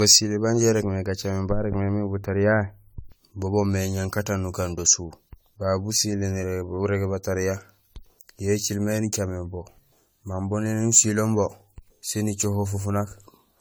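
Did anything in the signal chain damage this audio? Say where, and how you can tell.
Yes, generation loss runs throughout the speech, a codec-stage fault. It sounds swirly, hollow and smeared, with blurred consonant attacks, though content reaches 20 kHz. This likely comes from around fifteen AAC-LC re-encodes near 96 kbit/s, each quantising afresh on a shifted frame grid.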